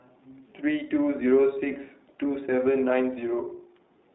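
Throughout the speech, the iLBC codec is plainly audible. Nothing passes outside a line band of about 200 Hz to 3.7 kHz. Each 20 ms frame is coded on its own. The result sounds narrow, slightly rough and synthetic. The artefacts suggest a rate near 15 kbps.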